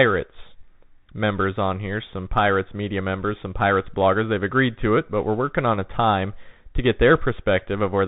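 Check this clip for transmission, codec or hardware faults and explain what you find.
One codec fault runs through the whole clip. The speech has passed through the Bluetooth CVSD headset codec from start to finish, and the damage is plainly audible. CVSD sends a single bit per sample, telling the decoder only to step up or down, with a step size that keeps adapting. The band stops near 4 kHz, so the speech sounds narrow and dull. Loud, bright sounds change faster than the steps can follow, so they distort. S sounds come out gritty, over a grainy hiss. All of this fits a 64 kbps CVSD stream.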